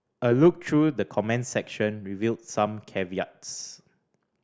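Listening to the speech recording, nothing technical stood out.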